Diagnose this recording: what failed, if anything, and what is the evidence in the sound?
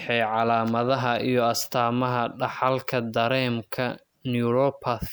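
Nothing stood out on listening to this speech recording that would point to a failure at any stage of the chain.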